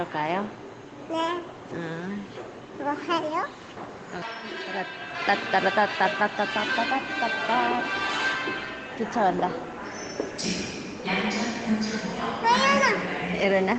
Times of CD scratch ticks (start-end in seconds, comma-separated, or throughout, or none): none